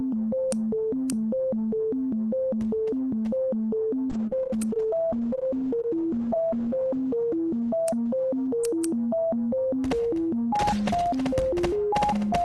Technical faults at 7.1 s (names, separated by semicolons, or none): call bitrate drop